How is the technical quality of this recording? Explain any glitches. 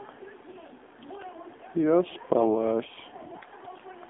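The technical quality is poor. The speech passes through an AMR narrowband mobile codec, and a short burst of AMR bit errors damages it once.

Throughout, the band runs only from 250 Hz to 3.5 kHz. The voice sounds buzzy and synthetic, which fits a low bitrate near 7.4 kbps.

From 2.33 to 2.44 s, AMR bit errors corrupt the voice model's pulses and fine values. Pitch and level hold, but the voice turns hoarse and gargly.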